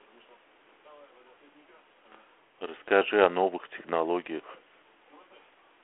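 No technical faults are audible.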